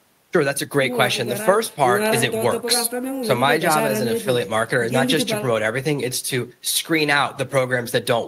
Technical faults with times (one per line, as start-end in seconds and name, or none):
none